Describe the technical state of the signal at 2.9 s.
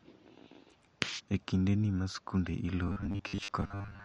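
At 2.9 s you're right inside the robotic sound from repeated short buffers, which kicks in at about 2.87 s, just after "kinde ni ma skunde", and runs to the end. It's a rigid, metallic 100 Hz buzz, likely from about half the audio being covered by repeated 10 ms chunks while the real signal gets skipped.

Under that, the whole clip carries plainly audible MP3 compression at a fairly low bitrate of about 48 kbps. The encoder likely ran short of bits, cutting the treble and leaving a watery, swirly quality with smeared attacks.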